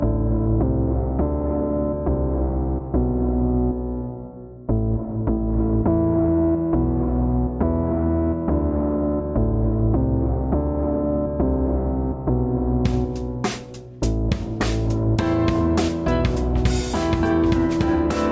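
No technical faults can be heard anywhere in this audio.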